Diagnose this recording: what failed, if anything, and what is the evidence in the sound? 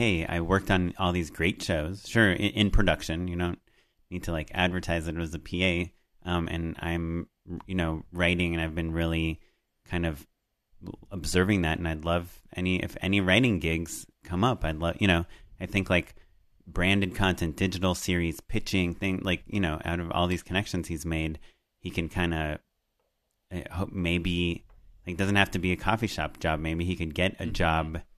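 Listening through the speech, nothing stood out as a failure at any stage of the chain.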